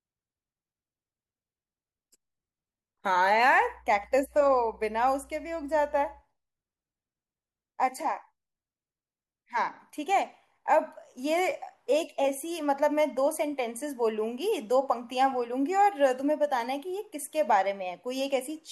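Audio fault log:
3.58–6.23 s, mains hum: a steady 60 Hz tone about 30 dB below the speech, leaking in from power wiring; its fixed pitch sets it apart from broadband rumble.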